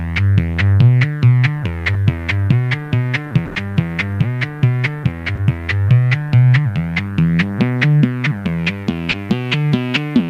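The audio has short concealed packet loss at 1.93, 5.35 and 9.11 s, where roughly 20 ms went missing and the receiver extended the previous sound, leaving quick smears or wobbles. There's also a burst of packet loss from 3.45 to 3.57 s: about 100 ms never arrived, so the decoder stretched and faded the last sound before resuming later on, with that stretch of audio gone.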